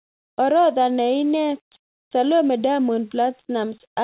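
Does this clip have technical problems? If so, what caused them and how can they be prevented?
No, this speech clip shows no technical problems: it comes through a standard call path whose G.711 mu-law codec at 64 kbps limits the sound to nothing above 4 kHz, as expected for that kind of connection.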